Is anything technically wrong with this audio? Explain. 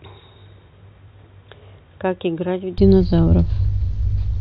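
Yes. From 0.0 to 2.78 s the speech is dull, band-limited near 3.8 kHz, quieter by roughly 10 dB and carries its own faint noise, then clears abruptly. The likely cause is an input switched to a poorer device. Unlike plain filtering, level, tone and noise floor all change together, with no gap at the switch.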